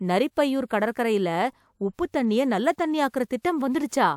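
No technical faults can be heard anywhere in the speech. There is nothing in the recording to mark with a time or trace to a cause.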